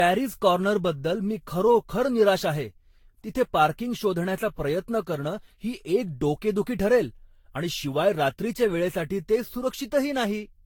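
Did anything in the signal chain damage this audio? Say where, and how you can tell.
Yes, generation loss at the codec stage throughout: swirly, hollow, smeared speech with blurred attacks, worse than one roughly 70 kbit/s pass explains, likely from about seven successive lossy re-encodes.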